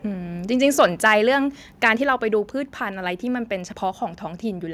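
Microphone overload from 0.8 to 1.14 s: the loudest syllables turn harsh and crackly, their peaks flattened about 3 dB past the limit, likely from an input volume set too high. Microphone volume stepped down at 1.02 s, mid-distortion: voice and background drop by about 2 dB at once, likely the call software cutting the device's input gain. Microphone overload returns at 1.86 to 1.89 s, a brief crackle about 2 dB over the limit that flattens a couple of percent of samples, again likely too hot an input. Microphone volume stepped down again at 2.04 s, just after that distorted burst, lowering the level by about 3 dB in one step, likely another automatic gain cut.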